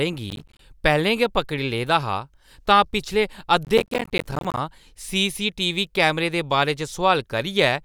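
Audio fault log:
0.30–0.60 s: processor overload crackle. A short burst of gritty tearing rides on the speech as the processor misses buffer after buffer, each miss dropping a tiny hard-edged slice of silence. The spacing suggests buffers of around 10 ms.
3.65–4.57 s: processor overload crackle again, longer this time, with dozens of these silent dropouts piling up into a rough crackle that stops once the load eases.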